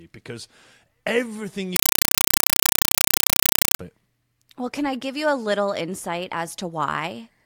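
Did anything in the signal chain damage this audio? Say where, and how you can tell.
Yes. From 1.76 s to 3.79 s the speech is replaced by very loud, chattering static. This is a compressed stream played as audio at the playback link stage. The static pulses at a steady 31.25 Hz, each burst about 5.33 ms long and followed by silence. That pattern is Dolby Digital framing, consistent with a 256 kbps AC-3 stream sent over S/PDIF or HDMI. The receiver treated the encoded frames as ordinary PCM samples and never decoded them.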